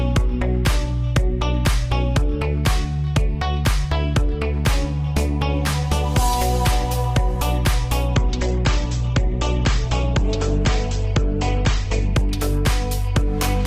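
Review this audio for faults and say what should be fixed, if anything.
From 8.14 s to 12.14 s the stream drops to a lower bitrate for four seconds: the treble abruptly vanishes above about 8.2 kHz and the sound turns thinner, with no gap at either edge. The sharp switch in and out points to the player stepping from roughly 64 kbit/s Opus down to about 16 kbit/s while the connection slowed. On a spectrogram this appears as a flat ceiling at 8.2 kHz across that block. The waveform stays continuous. To prevent it, give the player a deeper buffer or a steadier connection so it can stay on the higher rendition.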